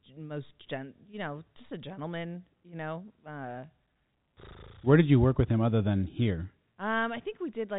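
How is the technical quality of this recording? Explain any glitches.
The technical quality is sound, with no glitches to explain in this telephone-band speech recording.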